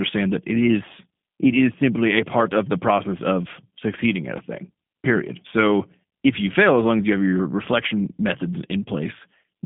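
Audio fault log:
throughout G.729 codec: speech confined to 150 Hz to 3.5 kHz, nothing above 3.7 kHz, with a plainly rough, synthetic texture, which fits an 8 kbit/s G.729A stream rebuilt from a vocal tract filter and sparse pulses; mere band-limiting would sound muffled, not artificial.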